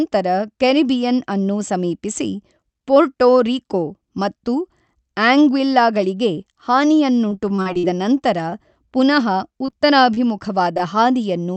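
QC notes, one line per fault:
7.29–7.99 s, repeated packet loss (robotic sound): packets kept failing to arrive, and each hole was patched by extending the previous sound. Roughly seven gaps, the longest about 42 ms, cover over a quarter of this stretch, giving choppy speech with about 140 ms lost, just before "ನಂತರ ಪುನಃ".
8.50 s, short stall from a late packet: one packet arrived late, so the jitter buffer ran dry and the receiver held the last sound for about 17 ms until it came. Nothing is lost, but the sound briefly drags with a faint buzz or dip.
9.66 s, 9.70 s, 10.14 s, 10.75 s, short concealed packet loss: each time about 20 ms of audio never reached the decoder in time and was filled by continuing the preceding sound, then blended back. The first two, just after "ನಂತರ ಪುನಃ", run back to back into a short smear. The others are brief smears or wobbles.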